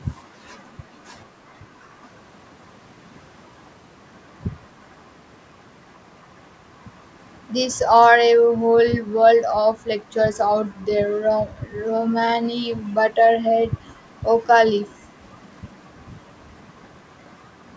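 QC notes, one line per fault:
0.17–0.42 s, background gated by the echo canceller: room sound dips by about 6 dB. The canceller turned the microphone down while the loudspeaker played, then released it.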